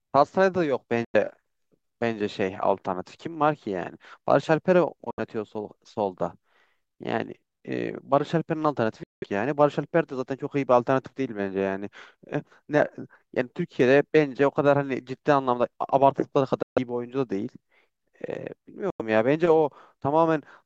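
Bluetooth dropouts at 1.05, 5.11, 9.03, 16.63 and 18.90 s: the speech abruptly cuts to silence for 93, 70, 186, 139 and 93 ms, then resumes further along, skipping that stretch. The likely cause is audio packets reaching the headphones too late and being discarded.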